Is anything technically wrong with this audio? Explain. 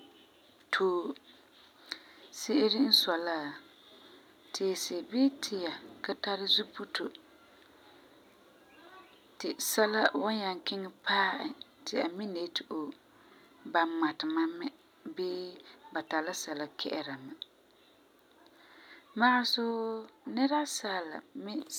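Yes, there's one brief spot of microphone overload, from 2.93 to 2.95 s. The peaks there run about 4 dB past the converter's limit and their tops get flattened, leaving a short harsh crackle. The likely cause is the mic input gain being set too hot.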